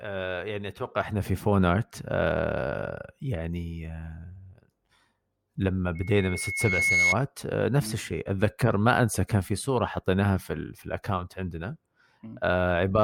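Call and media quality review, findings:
Loudspeaker feedback squeal, 5.95–7.16 s: 2.2 kHz tone swelling over about a second to a few dB above the speech. Mic-speaker loop gain above one. Growth separates it from a steady whistle.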